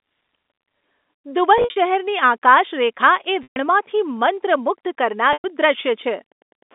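A telephone-band speech recording carried over G.711 mu-law (the band runs roughly 250 Hz to 3.6 kHz) shows packet loss with pitch repetition at 1.58 to 1.76 s, 3.43 to 3.56 s and 5.33 to 5.44 s. The first is 140 ms of loss scattered over 180 ms, with runs up to 60 ms. The others are solid 130 ms and 110 ms gaps. At each, the receiver repeats the last pitch period, fades it to silence, then cross-fades back into speech. From 2.98 s to the end, Wi-Fi interference adds a steady tick every 102.4 ms, about ten per second, at about 45 dB below the speech. This is a nearby radio's beacon being rectified by the audio circuitry.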